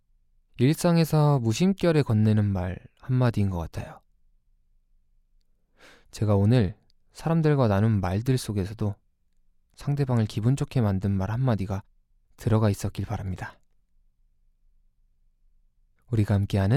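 No technical faults are audible.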